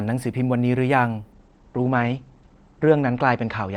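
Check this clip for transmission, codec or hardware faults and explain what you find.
One fault is present, a call bitrate drop that lasts from 1.33 s to the end of the clip. From that point the speech turns muffled and rough, with a watery, smeared texture, and it stays that way to the end, with the lowest rate held for about 1.6 s. The top end narrows from about 20 kHz to 8 kHz. The encoder was forced onto far fewer bits, consistent with a fall from roughly 64 to 15 kbps, so it quantised coarsely and discarded the high band.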